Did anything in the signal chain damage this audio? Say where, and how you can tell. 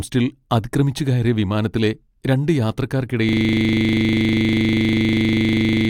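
Yes. From 3.29 s to the end, the driver or buffer stage falls into a system hang loop. One 40 ms slice replays exactly, producing a steady 25 Hz buzz. The waveform shows identical repeating blocks, and a spectrogram shows comb-like lines spaced 25 Hz apart.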